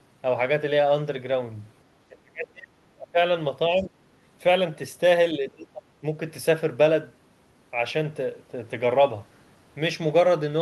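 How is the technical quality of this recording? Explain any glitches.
The recording has audible glitches: the talker's speech is repeatedly ducked, and one brief scrap of a second voice slips through.

Speech suppressed in double talk occurs at 2.08–3.18 s, 3.75–3.96 s and 5.37–6.03 s. The talker sinks by roughly 25 to 35 dB, likely because an echo canceller mistook simultaneous far-end talk for echo and attenuated everything.

The other side's voice leaks through at 3.78–3.84 s as a faint fragment, far below the talker. Residual loudspeaker sound likely reaches the microphone and the canceller fails to remove it. It is a separate voice rather than a delayed copy of the talker, which rules out ordinary room reverberation.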